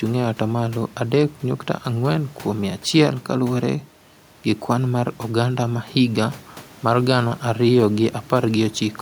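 Nothing stood out on listening to this speech recording.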